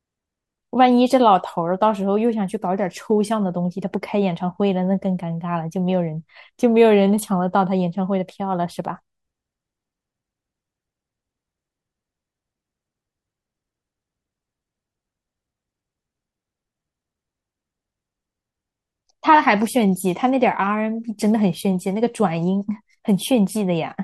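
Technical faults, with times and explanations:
No technical faults detected.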